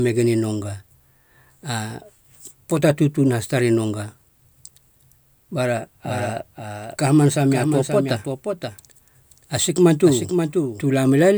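Speech, with a doubled audio track from 6.04 s to 10.82 s: a second, full-band copy of the speech runs roughly half a second behind the original and around 5 dB quieter. The copy carries no decay or room colouring, so it reads as a distinct repeat rather than an echo, and it cuts in and out abruptly at those times. The likely cause is the signal being captured again through a slower path.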